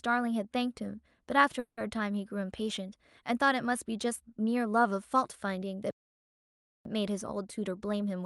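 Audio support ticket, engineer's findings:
Call audio freeze, 1.59–1.79 s: speech held and extended as a fading buzz, last 90 ms near-silent. Likely late packets draining the jitter buffer. Nothing lost; speech resumes where it stopped, about 180 ms later than before.

Playback stall, 5.91–6.85 s: output drops to silence mid-flow for roughly 0.94 s, then continues. Likely the player starved of data or its output thread blocked.

Jitter buffer speed-up, 7.59–8.24 s: speech runs about 111% speed, pitch unchanged, sounds hurried. Receiver trimming repeated pitch-period-length slices, around 70 ms total, to shed excess buffered delay.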